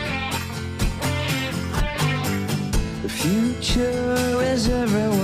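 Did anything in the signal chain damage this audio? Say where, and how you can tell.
No, nothing in the chain damaged this audio.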